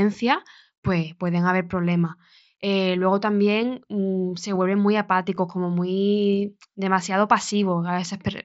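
Speech carried over a wideband mSBC Bluetooth headset link, which limits it to 8 kHz. It has one brief concealed Bluetooth headset packet loss at 5.36 s, between "mm se vuelven muy" and "como muy demasiado". About 15 ms of audio, consistent with a couple of dropped packets, is patched with a repeated stretch of preceding waveform.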